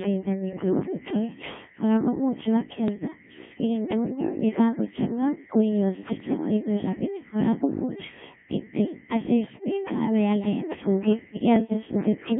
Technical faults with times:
0.00-12.39 Codec 2 vocoder
2.88-3.08 bit errors on digital voice radio
9.44-9.64 bit errors on digital voice radio
11.56-11.73 bit errors on digital voice radio

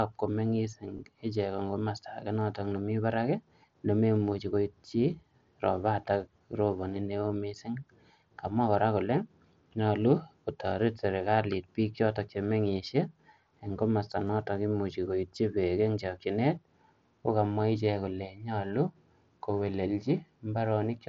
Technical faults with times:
0.97 concealed Bluetooth headset packet loss
2.40 concealed Bluetooth headset packet loss
14.27-14.29 concealed Bluetooth headset packet loss

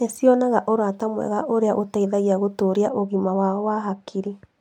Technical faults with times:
2.89-4.60 de-emphasis applied wrongly

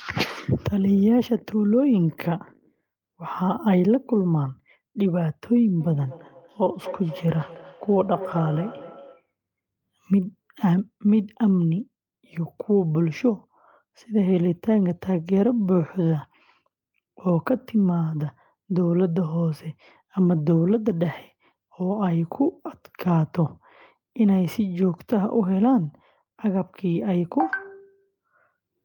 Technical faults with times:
5.80-9.29 feedback echo between two devices

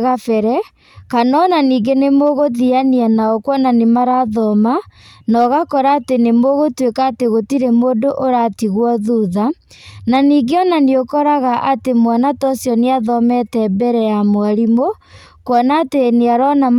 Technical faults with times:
2.25-2.29 hard clipping
5.39-5.93 hard clipping
15.55-15.60 hard clipping

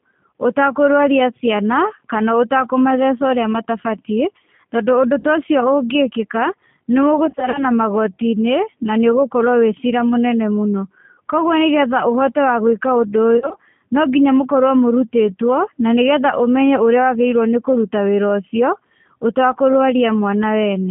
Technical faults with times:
0.00-20.90 G.729 codec
0.31 VoIP packet loss concealed by the speech codec
5.19-5.26 VoIP packet loss concealed by the speech codec
7.26-7.66 VoIP packet loss concealed by the speech codec
9.90-9.93 VoIP packet loss concealed by the speech codec
13.37-13.56 VoIP packet loss concealed by the speech codec

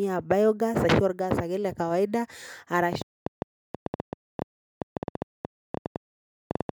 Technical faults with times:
2.93-6.70 train of clicks

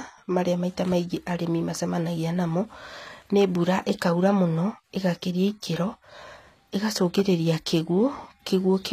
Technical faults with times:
0.00-8.92 HE-AAC compression

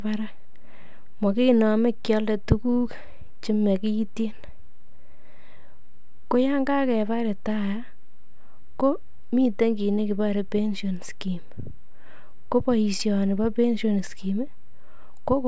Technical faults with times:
none

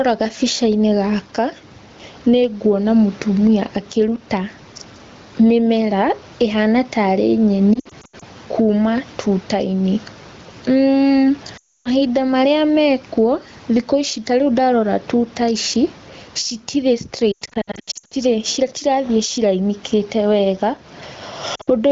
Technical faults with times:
0.00-21.92 gain pumping
7.74-8.23 lost AMR speech frames
11.57-11.88 lost AMR speech frames
17.31-18.14 lost AMR speech frames
21.55-21.71 lost AMR speech frames

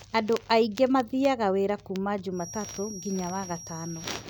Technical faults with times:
2.30-4.29 feedback whistle

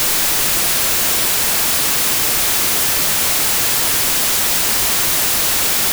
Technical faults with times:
0.00-5.93 wrong sample width

